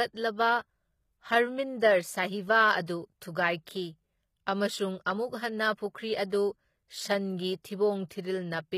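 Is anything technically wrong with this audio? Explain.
Yes. There are two problems.

Throughout the clip, the treble sounds synthetic. Its harmonics don't line up with the lower speech, and s sounds come out gritty, metallic or lispy. The damage is plainly audible. The likely cause is HE-AAC compression at a low bitrate, which fits around 20 kbps. That codec keeps only the lower spectrum. It rebuilds the top by copying lower bands upward and shaping them with a coarse envelope.

From 2.86 to 2.88 s there is pre-echo. A short hiss, spread over about 21 ms, arrives before an attack, and the attack sounds soft and smeared. This happens because the codec spreads its quantisation noise across a whole block. When a sharp onset falls late in the block, noise meant for the loud part leaks into the quiet moment before it.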